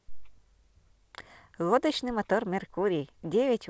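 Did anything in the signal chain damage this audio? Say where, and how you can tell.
No, nothing in the chain stood out as damaging this speech on listening, beyond the expected band limit of the call path, which carries nothing above 8 kHz, consistent with a 64 kbps G.722 codec.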